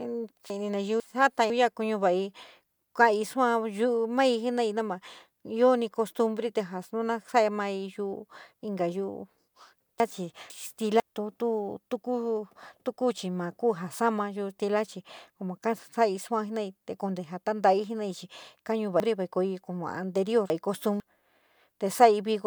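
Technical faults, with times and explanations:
0.5–1.5 s, 10.0–11.0 s and 19.0–21.0 s, chunks out of order: the audio arrives in 500 ms blocks, and in each span one block plays late. In the first two it trails the next block by one chunk; at 19.0–21.0 s it comes three chunks late, after the three that should follow it. Nothing is missing, but the sound is jumbled, with three hard joins at block edges.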